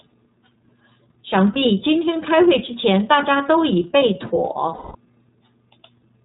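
A speech clip that sounds band-limited, slightly rough and synthetic throughout, with nothing above 4 kHz. This is the iLBC codec, and the damage fits its 13.33 kbps, 30 ms-frame mode. At 1.53 to 1.56 s, and again for a longer stretch from 4.74 to 4.95 s, the sound turns into a held, buzzy vowel, which fades in the longer stretch. These are lost iLBC frames: the decoder repeated the last pitch cycle with noise, which fits one lost frame and then seven.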